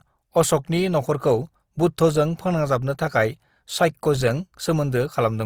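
From start to finish, the speech carries Opus compression damage, and it is plainly audible. The coding is likely Opus in its music mode. That mode keeps each band's energy but runs short of bits, so it fills bands with folded copies of lower ones or with noise. The result is rough and grainy rather than swirly. The full bandwidth stays, with no muffling, and the harshness fits a rate around 24 kbps.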